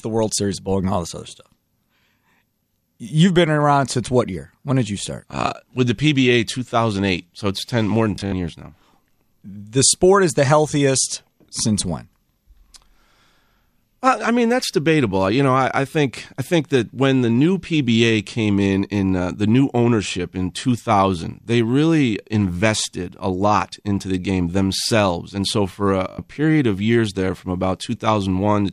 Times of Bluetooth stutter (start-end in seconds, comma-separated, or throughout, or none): 8.16-8.32, 15.92-15.94, 26.10-26.18